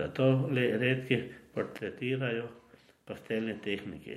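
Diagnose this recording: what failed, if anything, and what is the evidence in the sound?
One channel drops out at 1.78 s, just after "le redki", and stays gone to the end of the speech. The level falls abruptly by about 6 dB at that point and never recovers. That fits a stereo feed summed to mono where one side loses its signal: material common to both channels loses half its contribution, and anything present only in the missing side vanishes. The stage is likely analogue wiring, such as a failing connector or cable on one leg.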